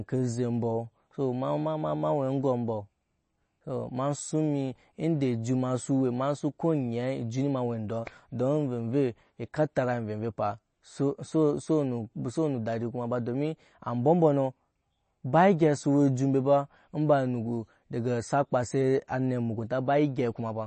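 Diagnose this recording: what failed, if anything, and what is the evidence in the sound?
The codec stage is where this fails, and MP3 compression is the likely cause. Across the whole recording the speech has nothing above 8.3 kHz, a hard treble ceiling, and the damage is plainly audible: a watery, swirling texture with chirpy sibilants. That fits an encoder starved of bits, around 32 kbps, cutting the top band outright and dropping weak spectral lines that flicker on and off between frames, so consonant attacks smear.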